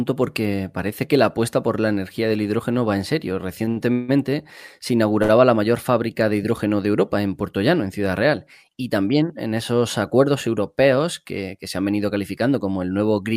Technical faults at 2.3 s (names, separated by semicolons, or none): none